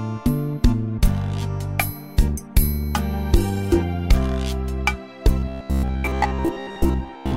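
Robotic sound from repeated short buffers runs from 5.40 s to 7.36 s. Across this stretch the audio turns into a hard, metallic buzz pitched at about 66.7 Hz, holding that fixed tone while the underlying sound still roughly shows through. The cause is likely a playback path starved of fresh data, looping a fragment of about 15 ms over and over, so most of the original audio in that span is skipped and replaced by repeats.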